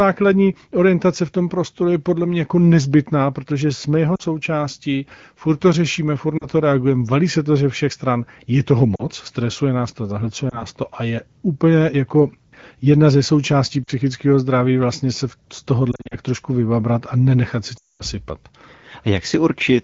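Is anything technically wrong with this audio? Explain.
Yes, there are lost AMR speech frames: dropouts at 4.16 s (after "nezbytná protože jsme jeho"), 6.37, 8.95, 10.50 (after "stresuje nás to zahlcuje"), 13.84 (before "zdraví vlastně se z"), 15.91–16.16 and 17.77–18.02 s. Corrupted frames made the decoder stretch the last good speech with falling gain. The short gaps sound like warbly dips. The scattered cluster near 16 s flutters, and the roughly 220 ms hole near 18 s fades quickly to silence.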